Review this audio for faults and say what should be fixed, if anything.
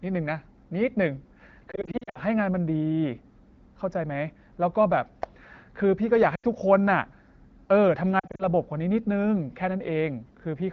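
Lost AMR speech frames at 1.71 to 2.20 s, 6.36 to 6.45 s and 8.19 to 8.47 s. The wideband decoder, sounding like about 12.65 kbit/s, fills each gap by repeating the last pitch and vocal tract settings with fading gain, so you hear brief dips that drop toward near silence in the longer runs, with the voice returning weak or rough for a moment. Better radio coverage or stronger channel error protection would prevent this.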